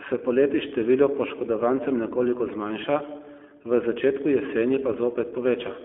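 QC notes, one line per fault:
Throughout: iLBC codec, each 20 ms frame coded independently, leaving speech audibly rough and synthetic, band-limited to 250 Hz to 3.4 kHz, fitting its 15.2 kbps mode.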